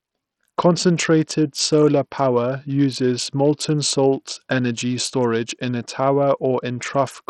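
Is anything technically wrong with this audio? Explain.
Yes. Throughout the speech, the sound shows heavy damage that points to Bluetooth SBC compression, likely at a low bit pool near 64 kbps. The coder's few fixed sub-bands starve the upper bands of bits, so treble flickers and gritty, aliased noise rides on everything. A spectrogram shows patchy, blocky high-frequency energy with nothing above 20.7 kHz.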